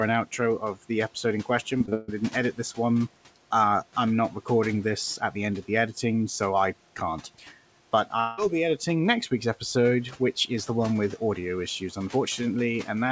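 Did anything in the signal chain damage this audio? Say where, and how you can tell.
Yes. Repeated packet loss (robotic sound) damages the audio at the network stage, from 1.78 to 2.10 s. Four gaps hit that span, the longest 144 ms. About 200 ms of audio is missing. Concealment fills 62% of the span, giving a choppy texture.

At 8.20 to 8.39 s, the sound turns into a fading buzz or hiss that continues the last sound for about 180 ms. It never drops to silence. Then the audio resumes with that piece gone. A long network dropout is the likely cause.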